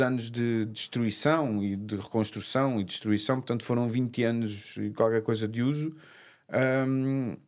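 Nothing stood out on listening to this speech recording.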